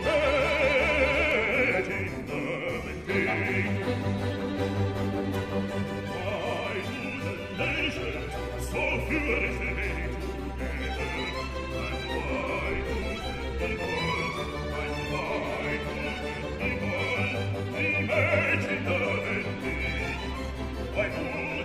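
Three single sharp clicks cut through the sound, at 1.31 s, 3.68 s and 13.84 s, each one instantaneous and leaving a thin vertical line across the spectrum. These are most likely dropped samples: a fraction of a millisecond of the stream goes missing, so the waveform leaps straight from one value to a later one. The gap is far too brief to remove anything audible, but the abrupt step itself is heard as the click.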